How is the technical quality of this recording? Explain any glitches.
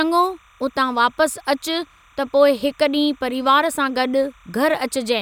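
Timecode bleed runs under the speech for the whole clip. A chirping warble sits well below the voice, about 35 dB down. Linear timecode has leaked in from a nearby track or cable. Its square wave flips between tones near 1 and 2 kHz, at a 29.97 frames-per-second rate.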